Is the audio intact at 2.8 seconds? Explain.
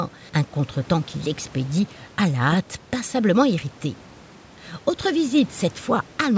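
Yes, the speech at 2.8 seconds is intact: no fault occurs there, and the room noise, about 26 dB below the speech, is part of the recording rather than a fault.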